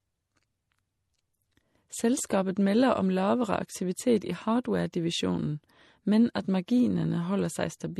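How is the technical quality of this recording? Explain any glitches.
The quality is limited by compression damage heard throughout the speech. Nothing is audible above 12.1 kHz. Two different sets of codec artefacts overlap, which likely points to transcoding between lossy codecs, perhaps MP3 followed by AAC.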